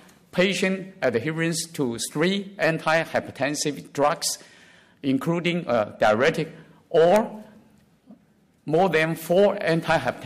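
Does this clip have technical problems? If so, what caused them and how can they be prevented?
No, nothing technical stands out here, so there's no fault to trace back or guard against.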